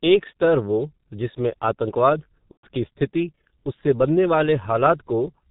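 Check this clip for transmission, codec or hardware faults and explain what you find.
Two faults are audible: heavy low-bitrate codec damage across the whole speech clip, and one concealed packet-loss event.

G.723.1 codec, throughout: the speech is coded at 6.3 kbit/s in 30 ms frames, with nothing passed above 4 kHz and a vocal-tract model that adapts slowly. The result is muffled, hoarse speech with smeared consonants. The hoarse, buzzy texture sets it apart from plain band-limiting, which dulls the sound but leaves it clean.

VoIP packet loss concealed by the speech codec, from 2.51 to 2.67 s: just after "स्तर वो जिसमें आतंकवाद" and before "स्थिति उससे बनने", about 120 ms of audio is missing, which fits four lost 30 ms frames. The decoder keeps repeating its last pitch and filter at falling gain, so the sound stretches into a fading buzzy tone or coloured noise. From the third lost frame on, G.723.1 mutes it. 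Because each frame builds on the last, the speech stays weak briefly after packets resume.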